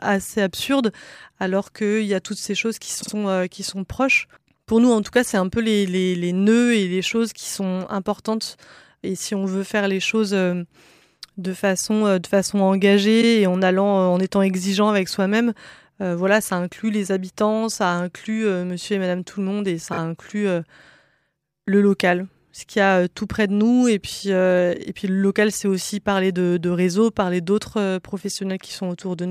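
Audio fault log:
3.02–3.12 s, 13.21–13.26 s, 19.92–19.98 s: repeated frames. A short block of compressed audio plays again, heard as a brief stutter. At 3.02 s a 52.2 ms block sounds three times, adding 104.5 ms. At 13.21 s the same length repeats once, adding 52.2 ms. At 19.92 s a 26.1 ms block plays three times, adding 52.2 ms. The 26.1 ms unit is one frame.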